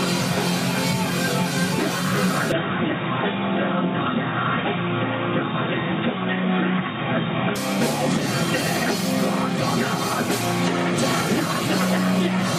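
From 2.52 to 7.56 s the sound turns dull and boxy, with nothing above 3.8 kHz. It has a new noise floor well below the signal but no level jump or gap. This likely comes from the input switching to a poorer device.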